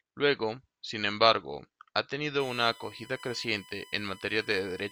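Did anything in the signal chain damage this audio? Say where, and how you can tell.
Yes. From 2.40 s to the end, a fixed-pitch USB whine sits about 20 dB under the speech, built on 1 kHz with its strongest component at 3 kHz. This is analogue wiring damage: the USB bus's 1 ms frame current is leaking into the power or ground.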